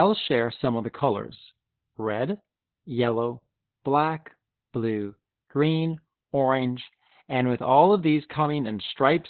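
Heavy Opus voice compression throughout, SILK-coded at what sounds like 8 kbps, cuts everything above 4.3 kHz, leaving the speech muffled, hoarse and slightly robotic.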